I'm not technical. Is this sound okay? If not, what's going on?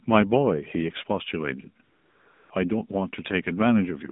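No. The AMR narrowband mobile codec is at work for the whole clip. This is the speech codec used on older mobile phone networks, and it squeezes the voice into a narrow band, from about 150 Hz up to 3.7 kHz, so everything sounds thin and muffled like an old phone call. It also rebuilds the voice from a simplified model rather than sending it directly, and here that damage is plainly audible: the speech sounds buzzy and synthetic.

AMR comfort noise fills the gap from 1.84 to 2.50 s, about two thirds of a second. During this stretch the phone decided nobody was talking and stopped sending the voice. The receiving end filled the silence with artificial hiss made from a rough description of the background. The real background sound is replaced by a smooth, even noise that switches in and out.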